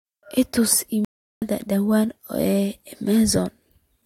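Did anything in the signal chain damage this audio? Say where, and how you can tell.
Yes. A stream reconnect at 1.05 to 1.42 s, a network-stage fault: the speech drops into about 0.36 s of silence, then resumes roughly a third of a second further on, with a muted or faded-in onset as a fresh decoder restarted mid-stream after the connection broke.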